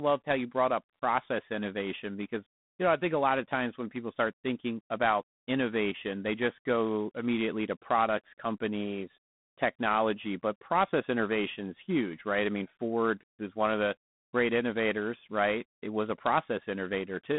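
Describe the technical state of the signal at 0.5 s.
At 0.5 s you're hearing G.726 ADPCM, and it runs through the whole clip. With only about 3 bits per sample coding the gap from an adaptive prediction, which fits 24 kbit/s, there's a plainly audible rasping hiss riding the speech level. The band is about 150 Hz to 3.6 kHz, with nothing above 3.9 kHz.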